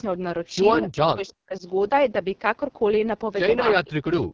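Throughout, the speech carries heavy AMR wideband (HD Voice) codec damage: a rough, raspy grain and a noisy, artificial top end above 6.4 kHz. That harshness fits the codec's lowest rate, 6.6 kbit/s, where too few bits remain to model the voice.

From 0.93 to 1.65 s, and again from 3.73 to 4.04 s, the speech drops out in pieces, falling by roughly 40 dB for around half a second and then a third of a second. This is likely speech suppressed in double talk, with an echo canceller attenuating the talker while the far side spoke.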